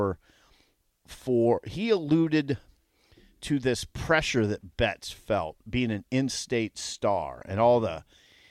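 No technical faults can be heard anywhere in this recording.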